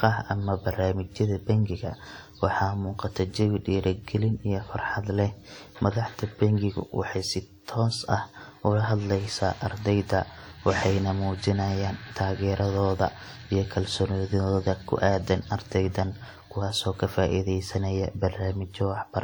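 Throughout the speech, a ringing, washy quality is plainly audible, with a hiss that swells and fades with the signal. The likely cause is WMA compression at a low rate, fitting roughly 48 kbps, which smears quantisation noise across long transform blocks, with nothing above 20.1 kHz.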